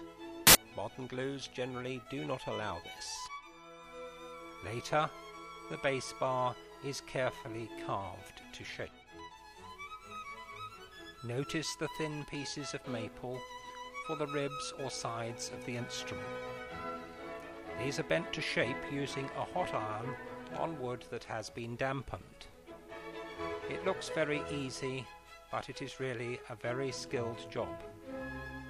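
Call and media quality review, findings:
Samples built from the wrong bytes, 0.47 to 0.55 s (about 80 ms): burst of loud, harsh broadband noise. Probable component: sample reader or decoder byte handling. Offset or swapped byte order promotes noisy low bits to most significant positions.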